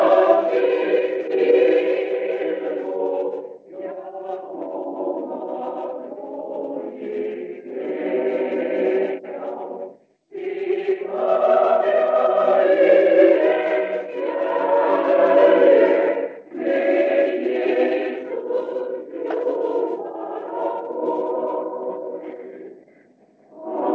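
Nothing's actually wrong here: the audio has come through a call path that leaves nothing above 8 kHz, which fits a wideband codec such as G.722, and beyond that there's no fault to point to anywhere in it.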